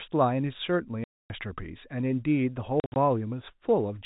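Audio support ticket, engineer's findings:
Packet loss filled with silence, 1.04–1.30 s and 2.80–2.96 s: received stream drops out to dead silence with hard edges. First hole 260 ms solid, second 120 ms scattered over 160 ms in short gaps up to 60 ms, fitting 20 ms packets. Likely jitter buffer or network path; G.711 telephone band plays through between the holes.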